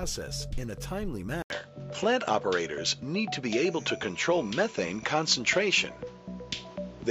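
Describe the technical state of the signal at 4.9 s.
At 4.9 s the sound is dull and band-limited, likely from the input being switched to a poorer device at 1.42 s. After an 80 ms gap, the spectrogram is empty above 7.6 kHz to the end, with a level shift of a few decibels and a new noise floor roughly 35 dB down.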